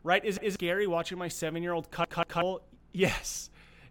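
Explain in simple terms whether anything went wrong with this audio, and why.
Twice in this speech clip, a repeated buffer makes a short chunk play again. New audio didn't reach the playback device in time, so it replayed the last piece it had. From 0.37 to 0.56 s, just before "watching my seven year", a 186 ms piece repeats once. From 2.04 to 2.42 s, after "my seven year old", it plays two extra times. Each repeat joins with a hard seam and is heard as a stutter. The piece length fits an 8192-sample buffer, and the repeats cover roughly 0.2 s and 0.4 s of the real audio.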